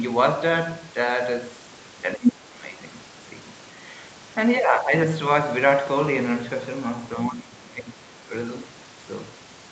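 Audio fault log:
2.16–2.75 s, 7.26–8.04 s, 8.24–8.31 s: speech suppressed in double talk. The echo canceller likely lost track of which signal was the talker and which was loudspeaker echo while both sides spoke, so it turned everything down. The voice sinks by about 10 dB over some 0.4 s in the first stretch. It drops harder, roughly 20 dB, across most of the second. A brief 10 dB dip at 8.24 s follows.
2.23–2.32 s: other side's voice leaking through. Residual echo slipped past the canceller, probably because adaptation was disturbed during the same double-talk moment. A short scrap of a second voice surfaces roughly 5 dB above the talker's level, inside the first suppressed stretch.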